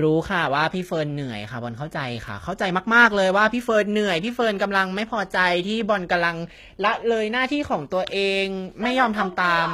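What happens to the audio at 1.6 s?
At 1.6 s the speech carries the same damage it has through the whole clip: the top end sounds bright but synthetic, with s sounds coming out gritty, metallic or a bit lispy. That's likely HE-AAC compression, and the plainly audible damage fits a very low bitrate of around 20 kbps. The codec keeps only the lower spectrum and rebuilds the treble by copying lower bands upward under a coarse envelope, so the upper harmonics don't line up with the real ones.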